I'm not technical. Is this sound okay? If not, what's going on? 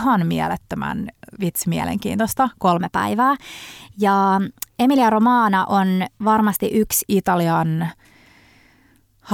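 No. From about 2.77 to 7.08 seconds, the speech suddenly runs a little fast and sounds slightly higher, as if someone nudged the playback speed. That's a wrong sample rate: the audio is being played back quicker than it was captured, so speed and pitch rise together, here about 9% faster and roughly a semitone and a half higher. The amount fits audio made at 44.1 kHz being played at 48 kHz.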